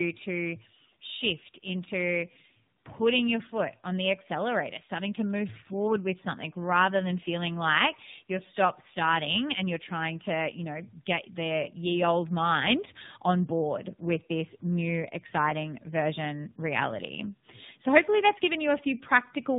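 Tandem speech coding runs through the whole speech clip: the sound is rough, muffled and warbly, with nothing above 3.8 kHz. This fits about three low-rate speech coders in series, such as an AMR-NB final leg, each re-encoding the previous coder's degraded output so the artefacts compound.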